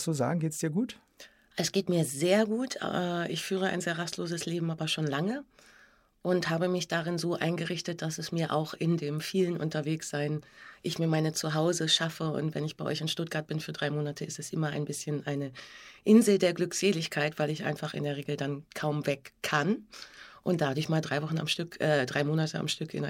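There are no technical faults to describe in the audio.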